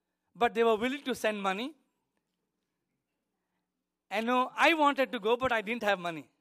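Right after "I wanted to go", from 5.80 to 5.82 s, there is a corrupt frame decoded. Bits inside the compressed data were damaged, yet the decoder played it anyway. Misread values placed energy at the wrong frequencies. The error spans a couple of frames, so it is very brief. It sounds like a short, faint blip or chirp sitting on the speech. It stays quiet, peaking somewhere around -40 dBFS.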